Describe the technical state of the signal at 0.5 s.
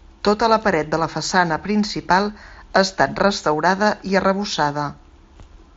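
At 0.5 s the speech comes through intact, with nothing beyond what the Bluetooth mSBC headset path normally imparts to a wideband signal.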